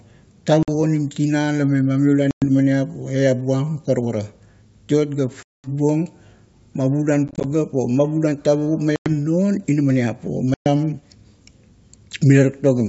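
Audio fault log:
0.63 to 10.68 s, packet loss on an ADPCM call: hard silent holes at 0.63, 2.31, 5.43, 7.28, 8.96 and 10.54 s, lasting 50 to 210 ms. At 7.28 s they are short scattered gaps. The decoder's predictor loses step, so speech returns slightly distorted.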